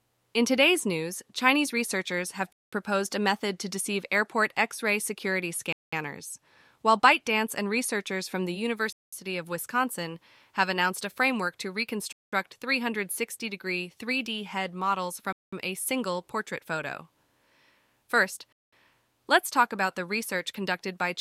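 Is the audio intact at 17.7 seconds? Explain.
Yes, the audio at 17.7 seconds is intact, with no fault audible at that moment.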